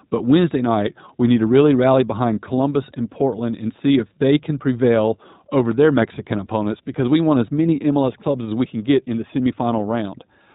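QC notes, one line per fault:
throughout: iLBC codec. The narrowband coding cuts everything above 4 kHz, and each frame's excitation is coded on its own, so the speech sounds slightly rough and synthetic. The sound fits the 15.2 kbps mode with 20 ms frames.
2.56 to 2.58 s: lost iLBC frames. Right after "to really rally behind", a 20 ms gap, which fits one lost frame, is filled by a repeated pitch cycle mixed with noise. It is heard as a brief buzzy, held vowel, and clean speech returns immediately because iLBC frames decode independently.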